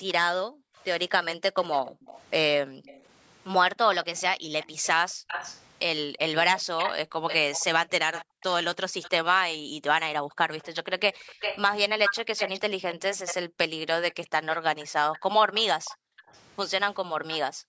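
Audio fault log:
0.00–17.68 s, background gated by the echo canceller: in three stretches, 0.00–2.85 s, 4.38–11.27 s and 15.41–17.68 s, the room sound dips sharply and then returns. The deepest drops reach about 40 dB. Each stretch holds at most about a second of actual gating, roughly half a second to a second. The canceller pulls the microphone down hard while the far end plays on the loudspeaker. When it releases, the background comes back.
0.08–17.38 s, echo leak: a delayed copy of the speech sits behind the direct sound for almost the whole clip. It trails by 307 ms and lies roughly 10 dB below the speech. That gap makes it a distinct repeat rather than a thickening. The likely cause is a loudspeaker-played call whose echo canceller left part of the pickup in place, so that residue was sent back into the line.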